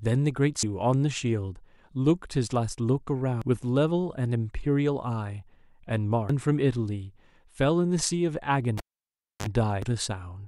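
At 0.63 s a short blip cuts into the speech. It is damaged data in a compressed stream. Some bytes in the coded stream were wrong or missing. The decoder could not read the frame there and lost its place. It then had to hunt for the next valid frame header. The same brief squawk returns at 3.42 s and 6.30 s. Each lasts only an instant.

At 8.78 s a pop marks a cable pulled and plugged in. The sound drops to near silence for about 0.64 s while the live lead is out. As the plug goes back, only its tip touches at first. That gives a burst of 50 Hz mains buzz lasting about 44 ms. A second pop follows as the speech returns at 9.47 s.

At 9.82 s one more damaged-data blip interrupts the speech, with the same brief chirp as before.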